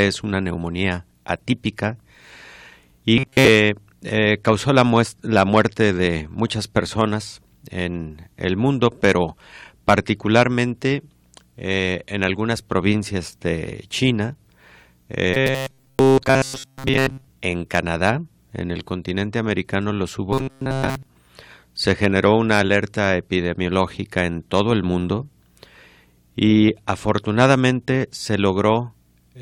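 At 3.17 to 3.49 s, 15.34 to 17.27 s and 20.32 to 21.07 s the speech takes on robotic sound from repeated short buffers: a rigid, metallic buzz locked at 133 Hz that still roughly follows the words. The likely cause is audio arriving too seldom, so a stretch of about 7.5 ms is replayed over and over while most of the real signal is skipped. A spectrogram shows flat, evenly spaced harmonics of 133 Hz, and the waveform shows identical repeating cycles.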